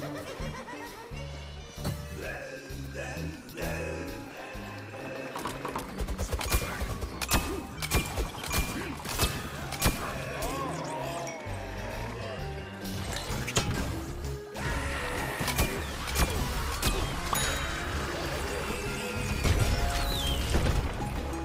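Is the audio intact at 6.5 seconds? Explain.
Yes, at 6.5 s the audio is intact, with no dropout, click, distortion or other fault.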